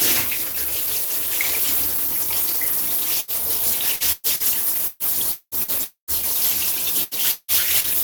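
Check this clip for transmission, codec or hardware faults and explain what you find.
The clip has network transmission faults: two bursts of packet loss, a stretch of repeated packet loss, two likely long network dropouts and one short concealed packet loss. No codec or hardware faults are evident.

Burst of packet loss, 3.20 to 3.31 s and 7.04 to 7.14 s: each time about 80 ms of consecutive packets failed to arrive in time. The receiver extended the preceding sound for roughly 75 ms, fading it, so a held buzz or dimming hiss sits where audio should be, then playback resumes with that portion gone.

Repeated packet loss (robotic sound), 3.96 to 5.71 s: packets went missing six times in quick succession, the longest gap about 0.2 s, and about a third of this span is patched by continuing the last sound. That makes the audio choppy, with pieces dropping out.

Long network dropout, 5.84 to 6.11 s and 7.31 to 7.51 s: a likely stall in delivery left about 0.24 s and about 0.16 s unreceived. 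The extended sound fades into silence for about 120 ms and 40 ms respectively before the audio returns further on.

Short concealed packet loss, 7.80 to 7.87 s: roughly 40 ms never reached the decoder. The receiver papered over it by continuing the previous sound and blending back into the real signal, heard as a brief smear or wobble.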